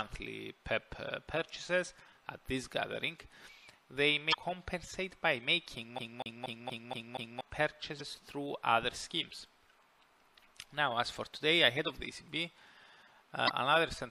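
Throughout the clip the sound has a watery, swirling quality, with the top end cut off and faint detail flickering in and out from moment to moment. Sharp attacks are smeared rather than crisp. This is likely MP3 compression: the encoder has too few bits, so it drops the treble above a fixed cutoff and zeroes quieter frequency components that then switch on and off between frames. The degree of damage points to a bitrate around 64 kbps.

From 4.30 to 4.35 s there is a brief chirp or blip. This is damaged data in a compressed stream. A run of bytes is corrupted, so the decoder cannot read those frames, loses sync and hunts for the next valid frame header. The result is a short burst of garbled sound. The same fault recurs from 7.97 to 8.01 s and from 13.45 to 13.50 s, each a similar short squawk about 45 ms long.

Between 5.99 and 7.41 s the audio stutters like a CD stuck on one turn. A slice of about 0.24 s plays six times in a row, with a small gap at each restart, giving a fast, regular skipping rhythm. 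The mechanism is a scratch that throws the laser back one track at the same point on every rotation, so the same section is read repeatedly before playback moves on.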